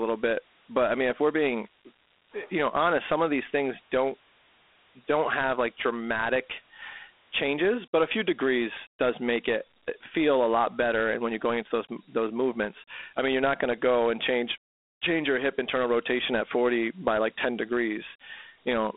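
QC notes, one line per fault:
Throughout: Dialogic VOX ADPCM. The speech sounds thin and gritty, confined to 250 Hz to 3.6 kHz with nothing above 3.8 kHz, and a coarse hiss rides along with it. Four-bit adaptive steps track the waveform only roughly, which fits 32 kbps telephone-grade storage.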